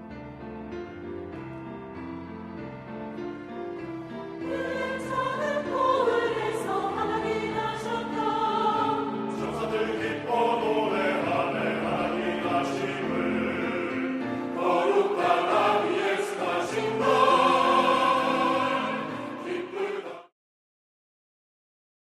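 There are no technical faults here; the sound simply eases out in a smooth fade from about 20 s to 20.34 s.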